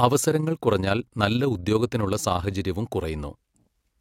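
From the start of the speech through to about 2.59 s there's overlap-add ripple. The audio was split into windowed frames and stitched back together with an overlap that doesn't add up to a steady gain, so the level swells and dips once per frame, by about 6 dB, somewhere around 30 times a second. You hear it as a quick, rough flutter on the voice, a sort of rough tremolo riding along at that frame rate.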